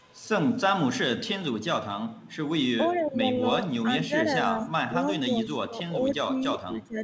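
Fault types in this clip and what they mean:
Echo leak, 0.0–0.28 s and 2.13–2.36 s: a faint copy of the speech trailing 443 ms behind, likely loudspeaker echo the far end's canceller failed to remove.
Speech suppressed in double talk, 2.79–3.45, 3.83–3.9, 4.07–4.27, 4.46–4.7 and 5.23–7.03 s: the speech dips by up to about 20 dB, likely the echo canceller ducking both overlapping talkers.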